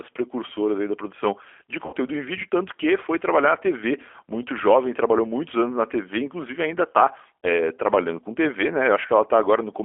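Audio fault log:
throughout: G.729 codec. The audio is held to roughly 300 Hz to 3.4 kHz. The speech is plainly rough and synthetic. A filter, a pitch predictor and a few pulses per frame rebuild each sound, which fits an 8 kbit/s G.729A stream.
1.86–1.95 s, 7.39–7.48 s: VoIP packet loss concealed by the speech codec. After "aí da produção de", about 70 ms are missing. After "inclusive ainda está", about 40 ms are missing. The decoder stretches its last pitch and filter into a fading buzzy tone or coloured noise. Weak or distorted speech persists into "em vídeo tanto que" and "trabalhando com".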